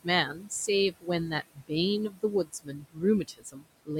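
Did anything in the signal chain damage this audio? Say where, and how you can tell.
Yes. Noise suppressor artifacts come from call processing: the suppressor pulls the steady background down by about 21 dB throughout, so the noise sinks between the words and rises under them.

Speech cut by the noise suppressor, also in call processing, happens at 0.29 to 0.51, 1.44 to 1.71, 2.10 to 2.23, 2.44 to 3.02 and 3.28 to 3.67 s. Mistaking speech for noise, it drops parts by up to about 22 dB, so they sound swallowed.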